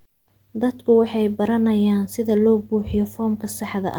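Comfort noise in place of the background occupies the opening 0.00 to 0.25 s of this speech clip. For those first 254 ms the real background, which sits about 62 dB below the loudest passages, is replaced by a steady, featureless hiss, with a level step of about 10 dB where the genuine background returns. The likely cause is discontinuous transmission of the kind Opus DTX performs: the sender goes quiet when it detects no speech, and the receiver fills the gap with synthetic noise shaped only roughly like the room.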